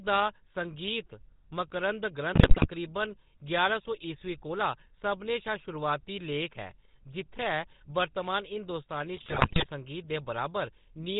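Speech runs through the GSM full-rate codec for the whole clip, and the damage is plainly audible. The voice has a buzzy, gravelly grain because the codec rebuilds it from a vocal-tract filter driven by a regular pulse train, keeping only a thinned-out excitation, and nothing above 4 kHz survives. That fits 13 kbps GSM full rate. Plain band-limiting sounds muffled but smooth, while this roughness is built into the voice itself and stays constant from start to finish.

GSM bit errors break in twice, from 2.34 to 2.68 s and from 9.16 to 9.67 s. In each burst the voice turns to squawks, pops and gargling. Corrupted filter, pitch and gain values are reaching the decoder, so individual frames get a warped spectrum or a sudden jump in level. Lost packets would leave gaps, muting or smooth concealment. Here the damaged frames are still played, which is why the sound becomes garbled instead of going quiet. 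The error density is high in both stretches, roughly 8% of bits in the first and 6% in the second.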